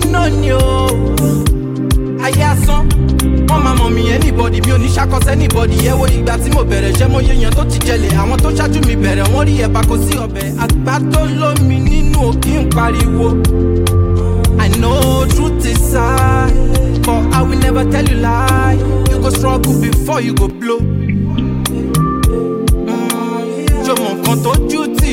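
From 10.16 s to 10.61 s, one channel drops out. For just under half a second the level falls abruptly by about 6 dB, then returns. This is likely one stereo channel going silent, so only half of the shared content survives the mono sum.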